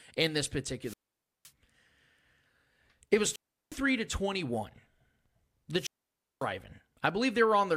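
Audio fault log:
0.82–1.51 s, 3.22–3.82 s, 5.76–6.46 s: wireless microphone squelch dropout. Hiss swells as the transmitter's RF signal fades, then the receiver's squelch mutes the speech for 0.52 s (just after "in this"), 0.36 s and 0.55 s before the signal recovers.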